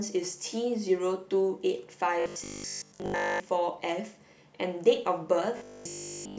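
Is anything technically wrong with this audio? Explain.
Yes. Robotic sound from repeated short buffers, from 2.2 to 3.4 s and from 5.57 to 6.37 s: audio likely arrived too seldom, so about 20 ms segments were replayed. This imposes a rigid 50 Hz metallic buzz on the speech, for most of the first stretch and throughout the second.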